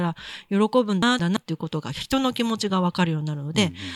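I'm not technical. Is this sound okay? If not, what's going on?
No, there's a glitch. Between about 1.02 and 1.37 seconds you get chunks out of order: two little pieces of the speech, each roughly a sixth of a second long, play swapped, so that moment sounds jumbled.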